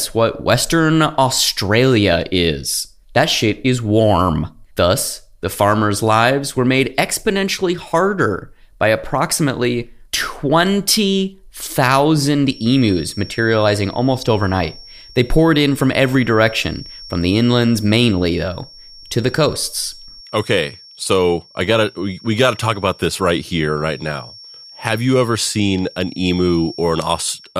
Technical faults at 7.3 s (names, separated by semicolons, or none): none